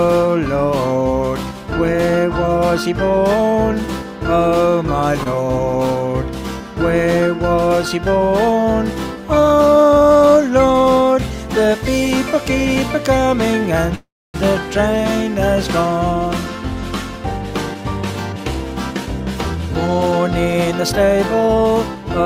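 Around 5.23 to 5.28 s there's a short stall from a late packet: one arrived late, the jitter buffer ran dry, and the receiver stretched the last bit of sound by 22 ms, so you hear a brief hold with a slight buzz or dip before it carries on where it left off.

At 13.95 s comes a call audio freeze lasting until 14.36 s. The sound turns into a fading buzz or hiss and then goes silent for about 270 ms before resuming from the same point, so 388 ms of gap gets inserted and nothing is lost. Packets held up in transit are the likely cause.

Then there's a jitter buffer speed-up from 16.13 to 19.07 s at 103% speed, trimming roughly a tenth of a second. A stronger one runs from 19.87 to 22.21 s at 108%, removing around a fifth of a second. The receiver snips out short pitch-period chunks to shrink the backlog, so the pitch stays the same, and the sound feels hurried in the second stretch.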